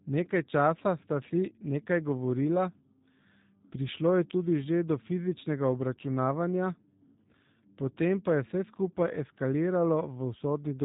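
Throughout the speech, the signal has passed through the G.729 codec, most likely its G.729A variant at a rate that fits 8 kbit/s, which rebuilds each frame from a vocal tract model and a few pulses. Everything above 4 kHz is gone, and the voice sounds plainly rough and synthetic.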